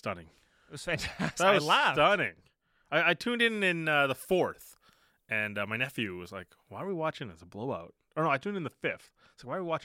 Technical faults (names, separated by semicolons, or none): pre-emphasis left on